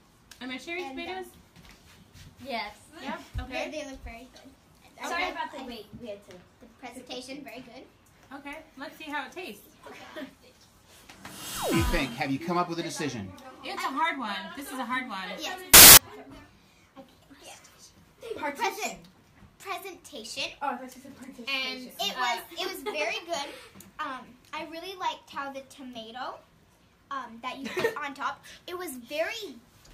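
A reader assembling sample values from the wrong bytes, whether shifted by a byte, swapped in order or misaligned, turns the fast-changing low bits into the bulk of each value, so from 15.74 to 15.97 s the audio is replaced by loud, harsh broadband noise.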